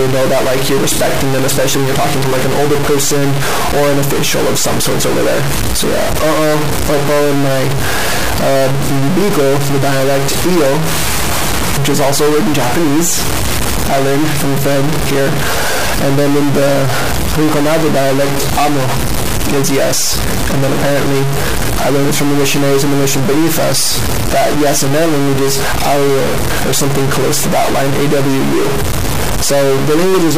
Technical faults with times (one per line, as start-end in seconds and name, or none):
0.00-30.37 stuck bit